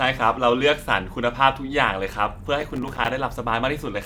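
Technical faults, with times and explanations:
2.61 to 3.10 s, processor overload crackle: a gritty burst of crackle tears through the speech. The processor keeps missing its deadlines for tiny buffers, which fits one of a few milliseconds. Each miss leaves a hard-edged silent gap. Dozens of these gaps scattered over the stretch form the crackle.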